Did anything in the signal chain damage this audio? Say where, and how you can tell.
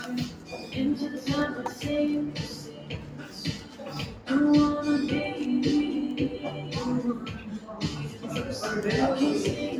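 Yes. At the call-processing stage, a noise suppressor meant for speech was left running over this non-speech audio. It treats steady and decaying sound as noise, so the level pumps by around 10 dB across the clip. Onsets survive, but sustained parts sink, and a spectrogram shows steady bands flickering and tails ending early.

The clearest cases of sound cut by the noise suppressor fall at 0.3 to 0.7 s, 2.53 to 3.36 s, 3.58 to 3.82 s, 4.13 to 4.28 s and 7.39 to 7.68 s, each dipping by about 5 to 6 dB. On the waveform, these appear as envelopes squeezed inward while neighbouring transients stay full height.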